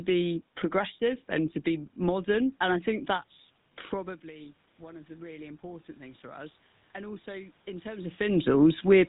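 A speech recording carries the GSM full-rate codec throughout. The codec models the vocal tract and drives it with a sparse, regularly spaced pulse excitation, which gives the voice a buzzy, gravelly roughness that is plainly audible. This pulse-train buzz is what separates it from a plain low-pass or narrowband channel, which would only sound muffled. Nothing is passed above 3.8 kHz, which fits a 13 kbps GSM full-rate stream. Just after "I think that's", at 3.9 s, the talker moves back from the microphone and the level at the input falls by about 20 dB. From there until 8.22 s, automatic gain is rising: the gain control gradually restores about 9 dB, so voice and background room noise swell up together over several seconds. That shared, slow swell marks it as gain control rather than the talker moving, since a change of position alters only the voice and happens quickly, as the drop at about 4 s and the later shift near 8 s do.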